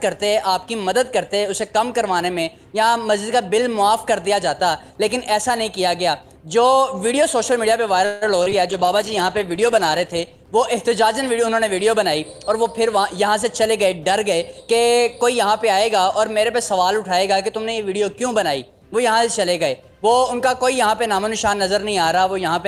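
At 8.05 s the sound stalls for about 161 ms, to 8.24 s. The last moment of audio is stretched into a buzzy, fading continuation, and then the sound resumes exactly where it left off. This is a call audio freeze, likely caused by packets being held up in transit so that the jitter buffer ran dry. Unlike packet loss, nothing is cut out. Instead, a gap is inserted and the rest of the audio is delayed by that amount.

Just after, two short concealed packet losses follow, at 8.43 to 8.48 s and at 8.50 to 8.53 s. Each is about 20 ms of audio that never reached the decoder, patched over by extending the preceding sound. They are heard as brief smears or wobbles rather than a held buzz. What separates them from the freeze is their length, a few hundredths of a second each, and the fact that real audio is replaced rather than pushed later.

From 8.70 s to 10.93 s a call bitrate drop takes over. 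The encoder falls from 32 to 14 kbps and stays at the low rate for about 1.2 s. The audio turns rough and watery, and the top end is dulled as high frequencies are trimmed. It is a sustained change in texture, not a momentary break, and it lifts once the bitrate recovers.

Between 12.20 s and 13.72 s, jitter buffer speed-up shortens the audio to run at about 107% speed, removing roughly a tenth of a second in tiny pitch-period slices. A second, shorter burst follows from 14.18 s to 14.59 s at about 108%, taking out a few hundredths of a second more. The pitch stays put while the timing hurries. That sets it apart from a playback-rate error, which would raise the pitch too, and from the bitrate drop, which alters tone rather than pace.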